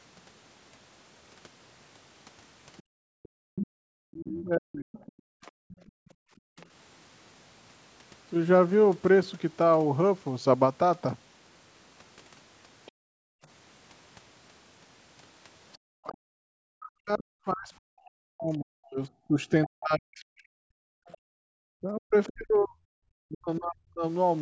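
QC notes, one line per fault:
2.77–6.66 s, 12.86–12.91 s and 15.73–22.32 s, other side's voice leaking through: a faint second voice, roughly 15 to 30 dB under the talker, likely loudspeaker echo the canceller failed to remove.
2.83–6.57 s, 12.92–13.42 s and 21.35–21.53 s, background gated by the echo canceller: room sound drops by up to about 40 dB, then returns, as the canceller clamps the microphone during loudspeaker playback.
4.07–4.97 s and 16.03–24.04 s, speech suppressed in double talk: the talker's voice dips as much as 40 dB or breaks up while both sides speak, likely the canceller muting near speech along with the echo.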